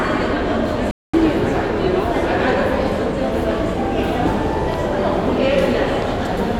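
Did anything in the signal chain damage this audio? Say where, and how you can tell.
Yes. At 0.91 s the sound cuts abruptly to silence and stays muted until 1.14 s, a hole of about 0.23 s, before resuming mid-stream rather than picking up where it stopped. This is a digital broadcast dropout at the reception and decoding stage. The receiver lost the signal or got frames that failed their checksum, so it muted until valid frames returned, consistent with around seven lost frames. Whatever was transmitted in that gap is gone.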